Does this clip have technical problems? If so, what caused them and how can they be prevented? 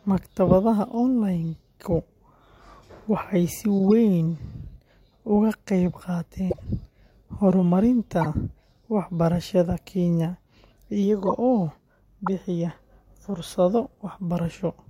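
Yes. Corrupt frames were decoded at 3.78–3.92, 6.50–6.66, 8.21–8.26, 11.25–11.28 and 12.26 s, each spanning two to seven frames. Flipped bits misplaced spectral energy, giving short chirps, squeaks, blips or noise bursts peaking near -10 to -20 dBFS, seen as bright misplaced patches on a spectrogram and spikes in the waveform. Checksums with concealment of failed frames would prevent this.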